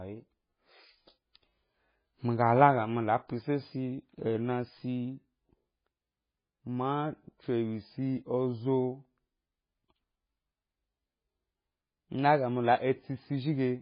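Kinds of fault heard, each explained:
MP3 compression: The speech runs through heavy, likely MP3-style lossy coding. Nothing remains above 5 kHz because the encoder cut the treble at a fixed point to save bits. Weak spectral lines drop in and out from frame to frame, giving a watery, swirling texture with chirpy, metallic sibilants and smeared consonant onsets. This degree of damage fits a very low bitrate, around 16 kbps.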